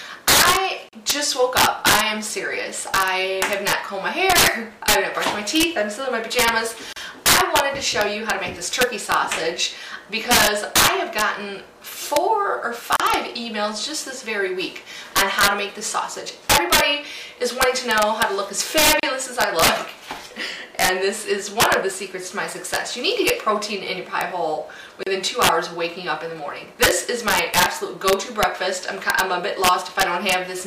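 Throughout the clip, the gain stage is driven about 12 dB past full scale, and its integer arithmetic wraps instead of saturating. This is integer overflow: any sample that exceeds the largest value jumps to the opposite extreme. Well under one percent of samples are affected, but each one flips across the whole range. On every loud peak this produces a violent, splintering crack, far harsher and more abrupt than ordinary clipping would sound.

The clip is also assembled from separately encoded pieces, about 6 s long, that were butted together without trimming the encoder start-up delay and end padding. This creates a gap at a join of encoded pieces. Each gap is a brief dropout with smeared edges, after which the sound resumes where it left off. The first runs from 0.89 to 0.93 s, about 41 ms. Later gaps of about 34 ms fall at 6.93, 12.96, 19.00 and 25.03 s.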